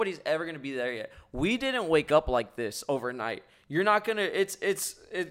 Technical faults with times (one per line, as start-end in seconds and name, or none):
2.08 corrupt frame decoded